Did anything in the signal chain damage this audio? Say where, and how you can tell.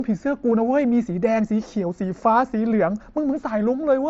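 Yes. Concealed Bluetooth headset packet loss on the headset-to-phone radio link at 0.50 s: about 15 ms of audio, which fits two lost 7.5 ms mSBC frames, never arrived. The receiver filled the gap with a copy of the best-matching recent waveform, leaving a brief, buzzy repeated patch with a small warble where real audio resumes.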